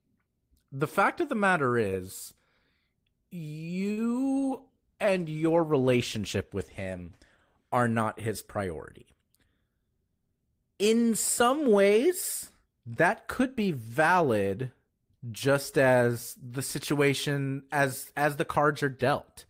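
It's a speech recording with two faults close together. From 4.37 to 8.63 s there's a call bitrate drop: the encoder was pushed from 32 kbps down to 18 kbps after the bandwidth estimate fell, and for about 2.9 s at the bottom the voice turns coarse and muffled as the top end gets trimmed, then clears once the rate recovers. Right after, from 9.14 to 9.72 s, a jitter buffer speed-up kicks in: the receiver had too much audio queued and snipped out short pitch-period chunks, around 70 ms in total, so that stretch runs at about 112% speed with unchanged pitch and sounds rushed.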